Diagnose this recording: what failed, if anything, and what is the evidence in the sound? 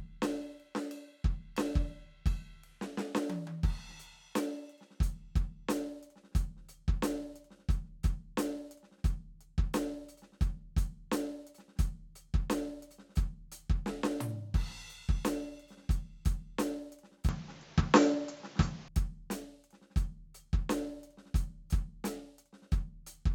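Between 17.29 and 18.88 s the music turns dull, nothing above 7.6 kHz, shifts a few decibels and gains new background noise: likely the input switched to a poorer device.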